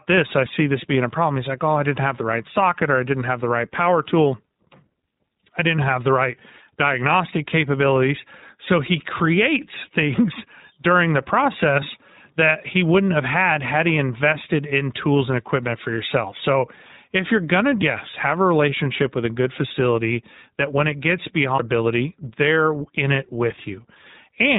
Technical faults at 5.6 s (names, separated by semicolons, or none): iLBC codec